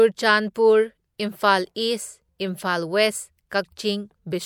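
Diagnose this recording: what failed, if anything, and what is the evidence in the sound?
A brief hiss smears ahead of sharp onsets at 0.54, 1.18 and 2.39 s, each lasting 10 to 13 ms: pre-echo from the codec, with block-wide quantisation noise leaking before each attack.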